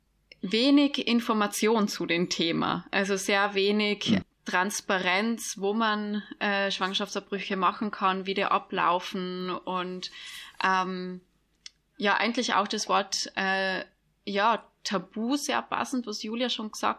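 No technical faults are audible anywhere in the speech recording.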